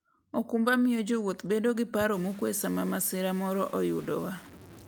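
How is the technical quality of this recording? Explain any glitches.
The second half of the recording is degraded by coarse quantisation. From 2.13 s to the end at 4.88 s, low bit depth without dither makes the speech grainy. The likely cause is truncation to about 6 bits with no dither, so the error tracks the signal at roughly 25 dB below it. Quiet passages sputter or drop out.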